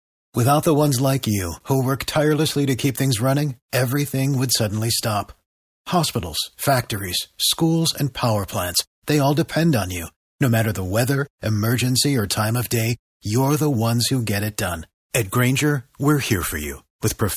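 There are no technical faults to describe in this speech recording.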